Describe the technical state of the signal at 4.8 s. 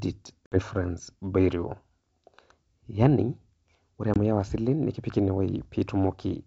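At 4.8 s the speech is intact, with no fault present, and the G.722 wideband telephone coding at 64 kbit/s keeps it clear up to about 7 kHz.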